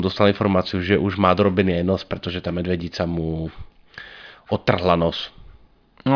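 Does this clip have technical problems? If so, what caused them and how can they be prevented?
No, there are no technical problems in this clip.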